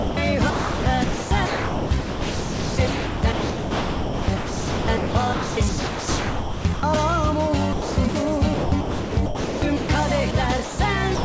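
From 0.00 to 0.17 s the opening sound is missing and steady hiss plays instead: sound dropped by the voice detector, likely because the sender's detector read the start as background and stopped sending, so the receiver filled the gap with comfort noise. On a spectrogram this shows as a flat, evenly textured band with none of the structure around it. The waveform holds a low, constant envelope until real sound begins.

Between 0.50 and 6.83 s, and again from 7.73 to 8.15 s and 8.54 to 9.89 s, the sound is chopped by the voice detector. The detector likely kept switching between sending and muting, and about 5.2 s, 0.3 s and 1.0 s of these stretches were replaced with synthetic noise. Quiet parts and edges vanish. On a spectrogram, patches of smooth, structureless noise interrupt the detailed material. In the waveform, the envelope alternates between normal bursts and a flat noise floor.

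Late in the clip, sound is dropped by the voice detector in three short gaps: 10.31 to 10.34 s, 10.64 to 10.79 s, and from 11.15 s to the end. Each time the sound likely fell below the detector's threshold and was swapped for comfort noise, so it cuts to hiss for a moment. These show as brief flat-noise blocks on the spectrogram. Throughout, nothing appears above 8 kHz, which fits a wideband G.722 call codec.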